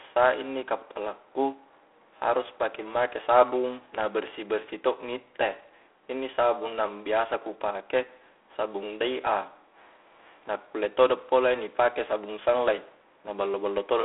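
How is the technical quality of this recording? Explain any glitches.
Quality is limited by G.726 ADPCM at 24 kbit/s throughout. Sending only three bits of difference from a running prediction leaves a rasping hiss that swells with the speech, in a phone-like band from 300 Hz to 3.4 kHz with nothing above 3.8 kHz.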